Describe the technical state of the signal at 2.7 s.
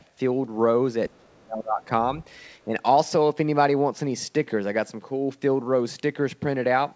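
At 2.7 s the speech dips by about 5 dB for a brief stretch between 2.66 and 2.72 s, roughly 70 ms in all. This is likely speech suppressed in double talk: the echo canceller seems to have mistaken the talker for loudspeaker echo while both sides were active and pulled the level down. Unlike a packet-loss dropout, the sound never goes silent and has no smeared or repeated concealment texture. It is a shallow, quick duck, with the band still topping out at 8 kHz as the G.722 path allows.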